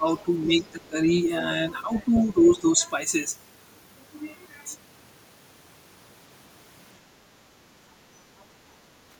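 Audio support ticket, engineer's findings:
Speech suppressed in double talk: talker dips around 15 dB at 0.00–1.11 s, 2.26–2.81 s, 8.15–8.30 s. Likely echo canceller ducking both talkers when it couldn't separate near speech from loudspeaker echo.

Other side's voice leaking through: faint second voice at 0.18–0.88 s (roughly 25 dB under talker), stronger at 2.14–2.60 s (roughly 15 dB under). Likely residual loudspeaker echo the canceller failed to remove.

Background gated by the echo canceller: room tone drops about 7 dB from 8.58 s to end of clip. Canceller clamping the mic while loudspeaker plays.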